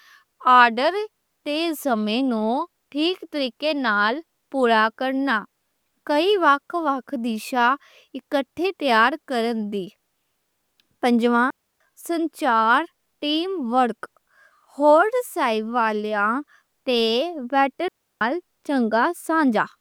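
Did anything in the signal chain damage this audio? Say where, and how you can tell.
Yes. Digital wireless dropout, 11.50–11.80 s and 17.88–18.21 s: the radio link lost data, so the receiver muted briefly, leaving clean, noise-free 0.3-second holes.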